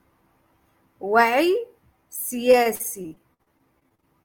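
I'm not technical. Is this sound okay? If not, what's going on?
No. From 2.51 s to the end at 4.25 s there is repeated packet loss (robotic sound). Chunks of audio repeatedly went missing, the longest gap about 53 ms, and each was patched by stretching the previous sound. Roughly a fifth of that stretch is filler, so it sounds choppy and robotic.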